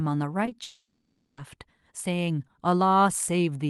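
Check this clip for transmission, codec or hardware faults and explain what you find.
Two kinds of transmission fault are present in this speech clip, which came through a WebRTC call path whose coding noise and top end, rolling off around 12 kHz, fit Opus at about 32 kbps.

Short concealed packet loss occurs twice back to back, from 0.45 to 0.49 s and from 0.49 to 0.53 s, each event covering about 20 ms of missing audio. The receiver bridged each gap by extending the preceding sound from its pitch or as shaped noise and then blending back into the real signal. The result is a brief smeared wobble where the speech momentarily loses its crispness.

A long network dropout runs from 0.63 to 1.39 s, the likely cause of roughly three quarters of a second of speech never being played. The receiver kept synthesizing the last sound across almost the whole gap, as a buzz or hiss that fades, leaving only a short quiet stretch near the end. 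The speech then resumes further on, with the lost portion simply absent.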